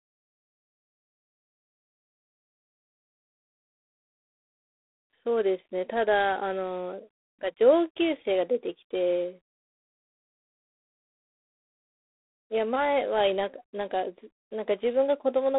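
G.726 ADPCM coding runs through the whole recording. Each sample is sent as a coarse difference from an adaptive prediction, and here too few bits per sample carry that difference, which fits the 24 kbit/s mode. The speech has a harsh, rasping hiss that rises and falls with its level. The audio is held to a telephone band of 300 Hz to 3.7 kHz, with nothing above 3.9 kHz.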